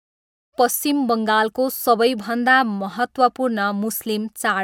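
Nothing in this speech recording stood out on listening, and the smooth fade-in at the opening reaches full level by about 0.56 s.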